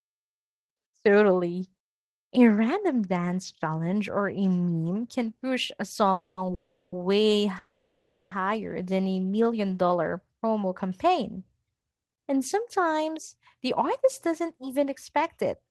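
Right after "meme can push a", the speech stalls three times in quick succession: 6.12 to 6.38 s, 6.54 to 6.93 s, and 7.58 to 8.32 s. Each is a call audio freeze. The last sound carries on as a fading buzz that drops into silence, about 90 ms of it in the first two and about 310 ms in the longest. Then the talker picks up exactly where they left off, so nothing is lost. The likely cause is packets held up in transit until the jitter buffer ran dry. Every stall pushes the audio later, by 250, 380 and 730 ms.

From 8.83 to 9.45 s, just before "dollar promo campaign", there's a jitter buffer slow-down. The receiver rebuilds its reserve by repeating single pitch periods and bits of pause over and over, adding 86 ms. The result is speech running at about 87% speed with the pitch unchanged, so sounds get drawn out.

The tail end, 13.07 to 15.65 s, has the opposite fault, a jitter buffer speed-up. 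The buffer is trimming surplus delay by cutting out tiny pitch-period pieces, around a tenth of a second in total. The speech runs about 4% fast at the same pitch.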